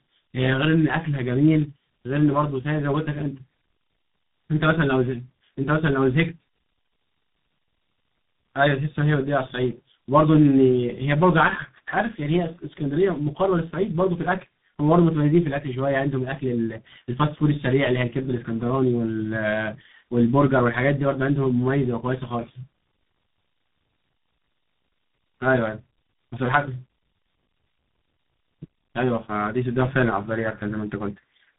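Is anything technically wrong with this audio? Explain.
Yes. All the way through, this speech has tandem speech coding. It sounds like it was coded twice in a row, probably a low-rate G.723.1-style coder and then G.726, the second working on the first's degraded output. The result is rough, muffled and warbly, with nothing above 3.8 kHz.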